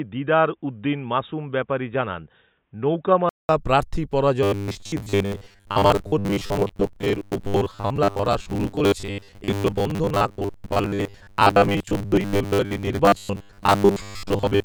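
Input switched to a poorer device, from 0.0 to 3.49 s: the speech is dull and boxy, with a faint new noise floor far below it, then a 200 ms silence before it clears. The likely cause is a lower-bandwidth microphone or headset profile.

Robotic sound from repeated short buffers, from 4.43 s to the end: the speech turns into a rigid metallic buzz at 100 Hz that still roughly tracks the words. The audio is likely being padded by replaying roughly 10 ms chunks, which fits a 10 ms buffer, so most of the real sound is skipped.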